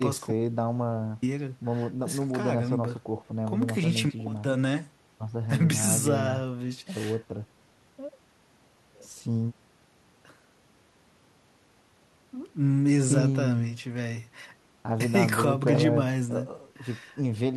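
At 0.32 s the input was likely lost, an audio dropout to silence: the speech cuts to dead silence, no room tone, until 1.22 s, about 0.9 s gone.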